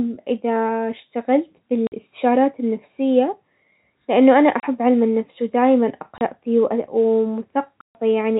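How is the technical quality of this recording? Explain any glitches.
The recording, telephone-band speech that never reaches above 4 kHz as G.711 coding allows, is interrupted by packet loss filled with silence four times. Audio packets failed to arrive, and the receiver put silence in their place with no concealment. The gaps fall at 1.87 s (50 ms), 4.60 s (30 ms), 6.18 s (30 ms) and 7.81 s (140 ms). Every length is a multiple of 10 ms, which points to 10 ms packets. Each hole cuts the speech abruptly, and the last one is the longest dropout.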